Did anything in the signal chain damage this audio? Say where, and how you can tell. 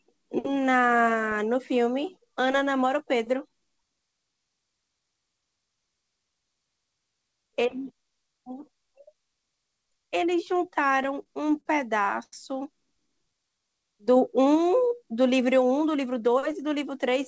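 Yes. Between 10.88 and 11.66 s the speech judders through a string of repeated stalls (stutter): eight brief holds in under a second, the longest 50 ms, together about 124 ms of filler, roughly a sixth of that stretch. Nothing drops out; it drags. This is the network and jitter buffer stage. Packets kept arriving late, the buffer ran dry repeatedly, and the receiver extended the last sound each time until data caught up.

At 12.23 to 12.33 s there is a short stall from a late packet: one sound is held about 91 ms too long, with a slight buzz or dip, then the speech resumes exactly where it stopped. A single packet missed its playout time, so the receiver stretched what it had and waited. That pushed the playout delay up by those 91 ms rather than losing any audio.

From 13.01 to 13.67 s the speech turns drawn out while the pitch stays put. Pace drops to about 89% as 77 ms is added. This is a jitter buffer slow-down. 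With its reserve low, the receiver repeated single pitch periods and slivers of pause over and over to rebuild a cushion. That produces the elongated sounds.

Between 15.64 and 16.48 s the talker sounds hurried, running at about 108% speed with the pitch unchanged. This is a jitter buffer speed-up. The buffer had accumulated more audio than its target, so the receiver trimmed short pitch-period chunks, around 70 ms in all, to pull latency back down. The whole clip is also band-limited to 8 kHz, consistent with a G.722 call path at 64 kbps, which accounts for the missing top end.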